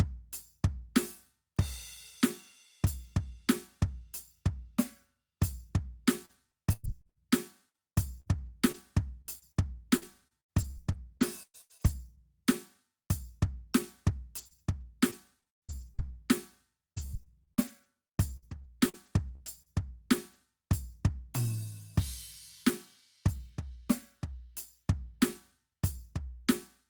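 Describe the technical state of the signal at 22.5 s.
At 22.5 s the music plays through intact, with no audible technical fault at that moment.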